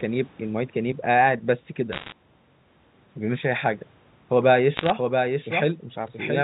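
A speech recording carried over a G.711 A-law telephone path, band-limited below 4 kHz, with two distinct faults. Bit errors on a digital phone line appear from 1.92 to 2.12 s and again from 4.77 to 4.90 s. Each flipped bit corrupts a single sample, and hits on the sign or upper bits produce sharp ticks. The first burst is denser, with an error rate on the order of one or two percent, and the second is lighter, under one percent. In both bursts the ticks form a short crackle over the speech. From 4.42 s to the end, a doubled audio track is present: a second full-band copy of the same speech runs roughly 0.7 s behind the original, about 5 dB quieter, with no reverberant decay or room colouring. It starts abruptly at 4.42 s. The cause is likely a second, slower capture path or an edit that left two out-of-step copies mixed together.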